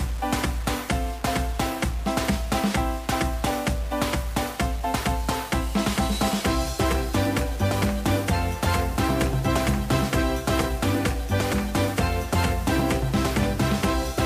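Throughout, grainy distortion tracks the sound, roughly 20 dB below it. Quiet passages turn gritty or sputter. Likely cause: low bit depth without dither, near 6 bits, rounded.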